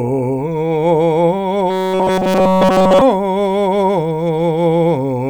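From 1.70 to 3.02 s the music turns into robotic sound from repeated short buffers: a rigid, metallic buzz fixed at 188 Hz throughout. It likely comes from audio arriving too seldom, so a fragment of about 5.3 ms loops while real audio is skipped. Unlike comb-filter colouring, that pitch stays locked regardless of the music.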